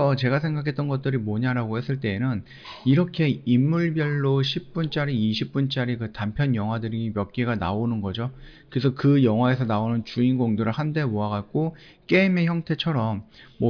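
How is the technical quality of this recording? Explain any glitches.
No glitches can be heard anywhere in the recording, and its signal stays continuous and steady throughout.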